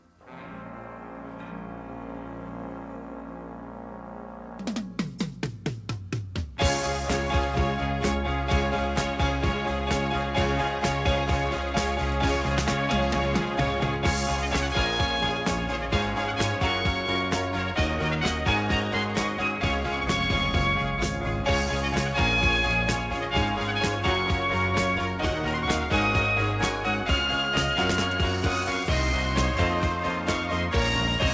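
No technical faults occur at any point, and the sound arrives through a call path that fits a G.722 codec, with nothing above 8 kHz.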